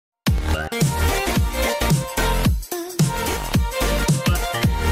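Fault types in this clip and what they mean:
Bluetooth stutter: at 0.38 s and again at 3.33 s, a brief repeated slice of about 21 ms is heard for roughly 30 ms, as the receiver, missing a late or lost audio packet, replays its last buffer before the sound picks up further along.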